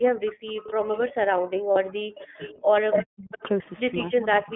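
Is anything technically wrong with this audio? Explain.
Yes. Four distinct faults are audible.

The iLBC codec shapes the whole clip. The speech sits in a 200 Hz to 3.4 kHz line band at 15.2 kbps with 20 ms frames, so the voice sounds plainly rough and synthetic. That grainy, buzzy texture separates it from simple band-limiting, which only dulls the sound.

Speech is suppressed in double talk from 0 to 2.41 s, from 2.97 to 3.4 s, and from 4.09 s to the end. The level drops by up to about 40 dB in the first two spans and about 15 dB in the last. An echo canceller likely mistook the talker for echo while both sides spoke. The voice dips or breaks into pieces over long stretches, unlike the brief held tone of a packet loss.

An echo leak returns a copy of the voice delayed by 280 ms. It appears at 0.26 to 0.32 s, 2.18 to 2.54 s, 2.91 to 3.04 s, 3.32 to 3.43 s, and from 4.5 s to the end. Its level ranges from about 25 dB down to as loud as the speech itself around 2.9 s. 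This is likely residual loudspeaker pickup that the far end's canceller missed. The fixed 280 ms lag gives a distinct repeat rather than the smooth tail of room reverberation.

Lost iLBC frames cause a 40 ms gap at 1.72 to 1.78 s, which fits two 20 ms frames. The decoder bridges the gap by repeating the last pitch cycle, so it sounds like a short, buzzy held vowel. Because iLBC frames are coded independently, the voice is clean again immediately afterwards, with no smeared recovery.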